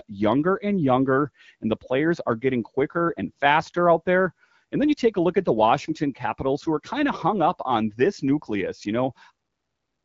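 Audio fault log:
No faults are present in this speech, whose band-limited coding fits AMR-WB at 12.65 kbit/s and which ends on a smooth fade-out in its last moments.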